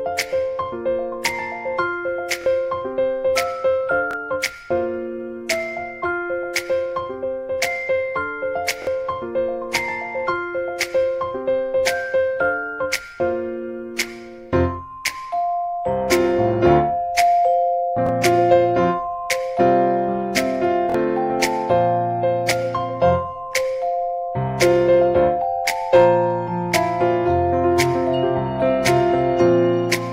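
At 2.42 to 2.46 s the playback device ran out of fresh audio and played its last buffer again, a repeated buffer. The segment's length, about 23 ms, fits a 1024-sample buffer. Here it plays twice more, so a tiny piece stutters with hard joins and roughly 50 ms of sound goes missing. The same fault recurs with a single extra play at 4.11 to 4.13 s, then with two at 8.82 to 8.87 s.

At 16.66 to 16.72 s the signal briefly exceeds what a stage can pass, about 1 dB over, and its peaks are sliced flat. This hard clipping is heard as crackle on the peaks.

Another single-repeat buffer stutter follows at 18.07 to 18.09 s. Clipping returns at 18.27 to 18.54 s, driven about 2 dB over, with crackle on the peaks. A double repeat at 20.90 to 20.94 s gives a short stutter.

The heaviest clipping, about 4 dB over, runs from 25.94 to 26.08 s. The flattened tops add high harmonics that turn the loud peaks into crackle.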